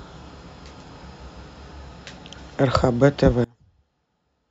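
From 3.44 s to the end at 4.50 s, the speech collapses to a faint residue about 29 dB down. The likely cause is one channel inverted: with one stereo side's polarity reversed, the shared centred content cancels on summing to mono, leaving only the small inter-channel differences.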